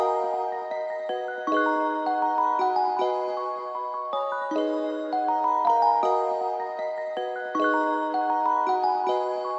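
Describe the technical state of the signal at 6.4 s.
At 6.4 s the signal is intact, with no dropout, distortion, clicks or other technical fault to be heard.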